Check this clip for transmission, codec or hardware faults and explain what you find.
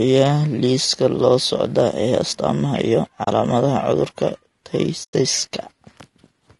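There are two problems: a rough coded quality over the whole clip, and two brief dropouts in the speech.

Low-delay AAC compression is the likely cause of the grainy texture throughout. Coarse coding leaves noise between the voice's harmonics, which fits a low bitrate of around 32 kbps.

AAC frame loss with muting shows up at 3.23–3.28 s, right after "socda ee astamaha iyo", and again at 5.03–5.14 s. The decoder zeroes the lost frames, leaving soft-edged holes of about 40 ms and about 0.1 s.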